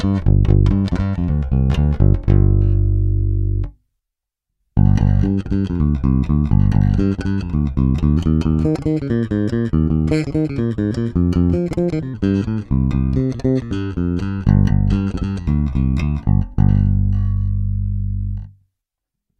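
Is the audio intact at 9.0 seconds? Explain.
No. From 8.17 to 12.14 s the section is at the wrong speed, likely from being played or fitted to the wrong clock. It runs 1.19 times too fast, so timing and pitch shift together: the sound turns hurried and rises by roughly three semitones.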